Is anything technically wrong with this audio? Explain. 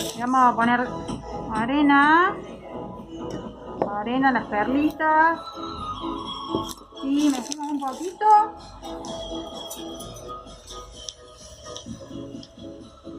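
No, nothing is technically wrong with this audio.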